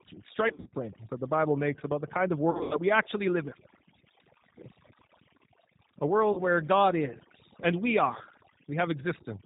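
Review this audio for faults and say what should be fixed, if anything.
Overdone noise removal runs throughout. Bands near the noise estimate are pulled away, leaving near-silent gaps with twinkling specks, unlike codec roughness, which doesn't empty the background.

G.729 codec damage is plainly audible throughout. Nothing passes above 4 kHz, and the slightly rough, synthetic texture fits an 8 kbit/s pulse-based speech model rather than simple low-pass filtering.

VoIP packet loss concealed by the speech codec occurs at 0.48–0.75 s (before "that the"), 2.51–2.80 s (between "about the kind of" and "we actually live"), and 6.33–6.41 s. The decoder extrapolates into buzzy or noisy sound that fades, not silent dropouts, and weakness lingers afterward.

To prevent these, lighten the noise reduction, choose a wideband codec at a higher bitrate, and add jitter buffering or forward error correction on the network path.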